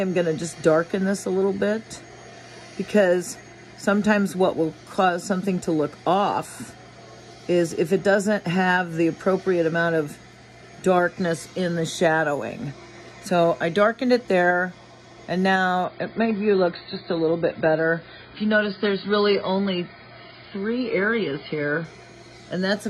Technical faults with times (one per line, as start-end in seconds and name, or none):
15.85-21.85 adaptive stream at a lower bitrate